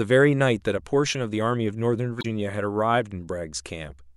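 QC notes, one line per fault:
2.18–2.25 s: damaged data in the compressed stream, a quick glitch as the decoder chokes on corrupt frames, loses sync and hunts for the next header.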